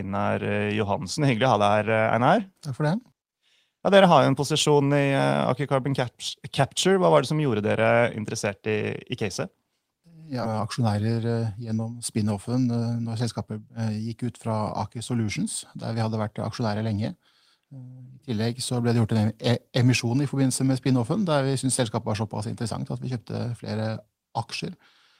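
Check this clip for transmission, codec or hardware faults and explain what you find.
Two transmission faults appear close together.

Skip ahead, 10.43 to 10.45 s: about a second of speech was discarded while later audio was already queued, so playback leaps forward with no filler. The speech on either side is joined almost seamlessly, and a chunk of content simply vanishes.

Jitter buffer speed-up, 10.53 to 12.01 s: the buffer still held more audio than it aims for, so the receiver trimmed many short pitch-period slices, removing about 200 ms in total. Speech runs at 112% speed with unchanged pitch and sounds noticeably hurried.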